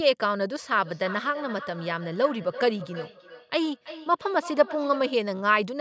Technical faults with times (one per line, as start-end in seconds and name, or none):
0.77-5.24 feedback echo between two devices